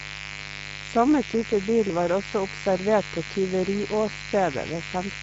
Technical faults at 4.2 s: mains buzz; Speex codec

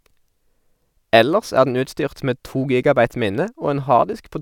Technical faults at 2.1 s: none

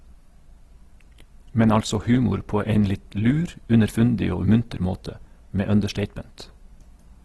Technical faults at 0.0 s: Opus compression

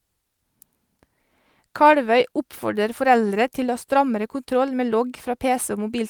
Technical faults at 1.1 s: none

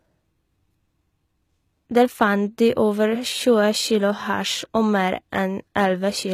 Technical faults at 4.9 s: HE-AAC compression

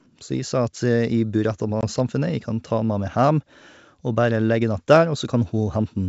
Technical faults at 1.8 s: packet loss on an ADPCM call

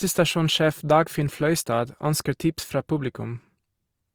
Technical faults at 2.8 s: Opus compression

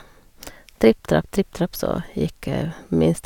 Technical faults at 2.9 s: none

